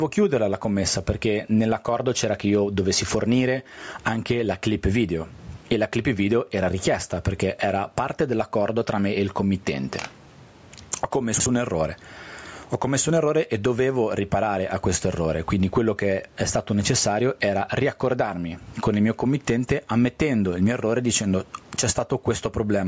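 Throughout the speech, the gain swings by roughly 20 dB, pulling down under each loud syllable. This is gain pumping, likely from excessive input gain driving a fast limiter. From 11.34 to 11.46 s the chunks are out of order: one 60 ms chunk plays a slot late, after the chunk that should follow it, producing a brief jumbled stretch.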